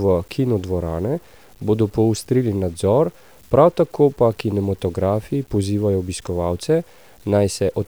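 Low bit depth without dither runs throughout: the speech sounds grainy, with gritty quiet passages and noise around 35 dB down, likely from truncation to roughly 8 bits.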